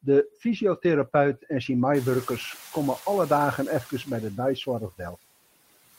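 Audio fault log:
1.94–4.04 s, noise suppressor catching up: the room noise jumps by about 24 dB at around 2 s and the suppressor's noise estimate lags it for 2.1 s, so the louder noise passes through with less reduction at first, then sinks by about 5 dB once the estimate adapts.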